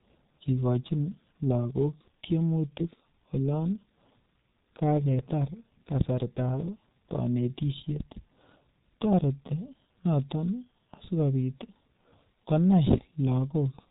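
A speech clip run throughout through the G.723.1 codec at about 6.3 kbit/s, heavily damaged: muffled, hoarse, with smeared consonants. A spectrogram shows energy cut off flat near 3.8 kHz, with blocky, slowly changing harmonic structure from its 30 ms frames.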